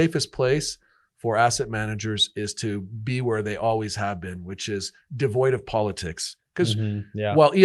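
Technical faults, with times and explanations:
Nothing stood out on listening to this speech clip, which came through a call path with the band-limited sound of an Opus stream at around 32 kbps.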